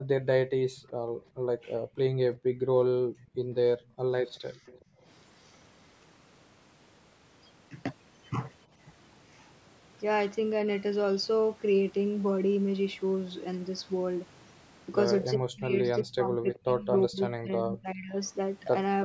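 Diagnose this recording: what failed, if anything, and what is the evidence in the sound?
Call processing, echo canceller. Background gated by the echo canceller at 0–0.09, 0.75–1.97, 2.36–4.13 and 4.53–5.05 s. Room sound drops about 40 dB, then returns.

Echo leak, same stage. A faint copy of the speech, delayed 381 ms, at 0.76–0.9, 3.23–3.35 and 4.28–4.82 s. Likely residual loudspeaker pickup that the canceller missed.

Speech suppressed in double talk, from 15.37 to 18.15 s. The speech dips deeply in pieces. The likely cause is the canceller ducking both talkers while they overlap.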